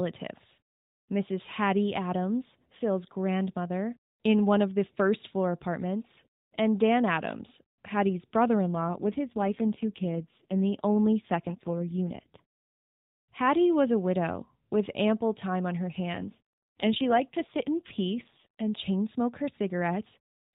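Speech carried over a narrowband mobile codec, with two AMR rate drops, at 8.64–12.42 s and at 16.14–18.81 s (after "ample time on her", recovering by "smoke her"). In both the voice turns buzzier and more synthetic, which fits a switch from 12.2 to 5.9 kbps. Unlike packet loss or a bandwidth switch, there are no gaps and the band stays the same.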